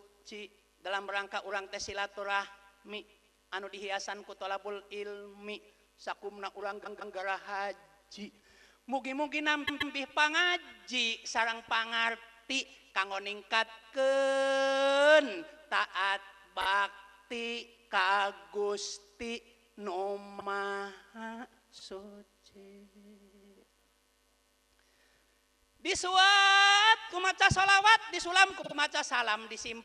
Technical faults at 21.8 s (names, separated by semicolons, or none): repeated frames